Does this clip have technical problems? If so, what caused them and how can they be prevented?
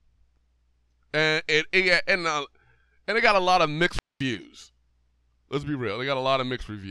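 Yes. Just after "got a lot of", from 3.88 to 4.27 s, hiss swells, then the speech cuts to near silence for about 0.22 s before returning. This is a wireless microphone squelch dropout: the FM radio signal faded until the receiver's squelch muted its output. Keeping a clear line of sight, shortening transmitter distance, positioning receiver antennas well and choosing an interference-free frequency prevents it.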